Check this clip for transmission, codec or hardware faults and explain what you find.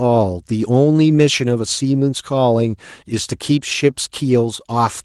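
Two related timing faults run through this speech.

Clock drift between sender and receiver is present for the whole clip. The sender's clock appears to run about 4 percent fast, so the receiver's jitter buffer keeps overfilling and has to shed audio to avoid falling further behind. The result is a faint, persistent unsteadiness rather than any single obvious glitch.

Repeated timing corrections run from 0.17 s to 4.74 s. The receiver keeps trimming short slices to stay in step, so playback runs at roughly 104 percent speed. These are heard as small, irregularly spaced hiccups and a slightly hurried, uneven tempo.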